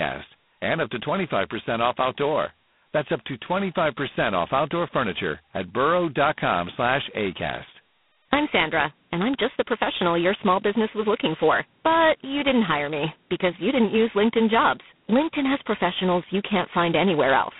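Throughout, G.726 ADPCM at its lowest rate, likely 16 kbit/s, leaves a harsh, rasping hiss tracking speech level, with nothing above 3.9 kHz.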